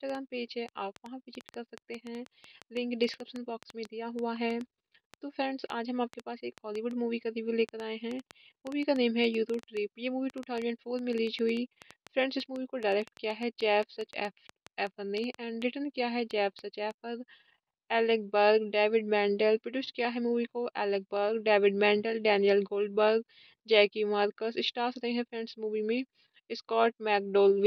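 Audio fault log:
0.1–16.92 s, train of clicks: roughly a hundred alike pops at an uneven pace averaging 5.3 per second, ticking over the sound and into pauses, a few dB above it, likely from interference. They show as thin broadband vertical lines and sharp waveform spikes.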